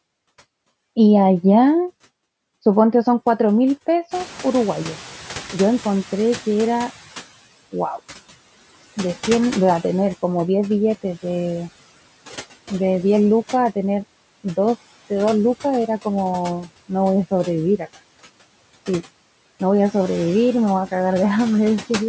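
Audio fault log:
throughout: noise suppressor artifacts. Steady noise is pulled down by about 16 dB, frame by frame. The noise sinks between the words and rises under them.
4.11 to 7.27 s: noise suppressor catching up. Room noise jumps sharply around 4 s. The lagging noise estimate cuts only about 12 dB, then adapts over 3.16 s.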